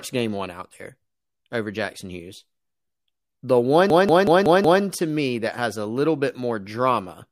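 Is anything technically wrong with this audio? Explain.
Yes. From 3.90 to 4.83 s, just before "to me that has", there is a system hang loop. The system stalled while the hardware kept replaying one 186 ms stretch, which fits an 8192-sample buffer, five times. This produces a machine-gun stutter at 5.4 Hz. The waveform and spectrogram show identical blocks repeating side by side, and little if any audio is lost afterwards.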